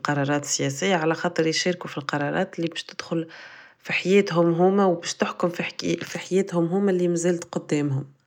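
No dropouts, clipping, glitches or other technical faults are audible anywhere in the recording.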